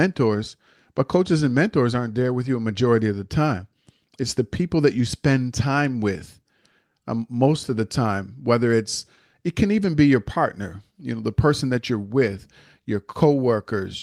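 No technical faults can be heard anywhere here.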